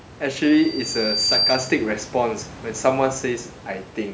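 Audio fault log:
0.43–1.98 s, loudspeaker feedback squeal: a single tone at 4.7 kHz swells over about a second until it sits roughly 5 dB above the speech. The microphone is hearing its own loudspeaker. At that frequency the loop gain passes one, so the tone feeds itself.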